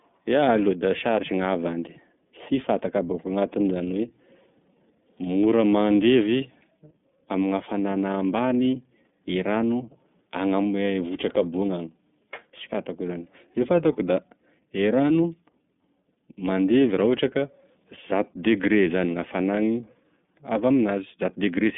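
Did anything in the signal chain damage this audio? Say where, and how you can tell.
Yes. The damage comes from the codec stage and runs through the whole speech clip: this is iLBC coding. Nothing reaches above 3.8 kHz, and the passband sits at roughly 150 Hz to 3.6 kHz, so sibilants lose their top. The speech has a clearly audible rough, synthetic grain. Each block, consistent with 30 ms frames at a rate that fits 13.33 kbps, has its excitation coded independently of the previous one, so the fine waveform detail is coarsely approximated.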